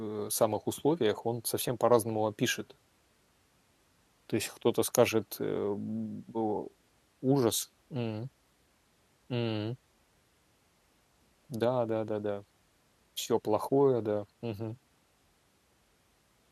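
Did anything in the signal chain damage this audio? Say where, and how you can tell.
No, nothing stood out on listening to this speech that would point to damage anywhere in the signal chain.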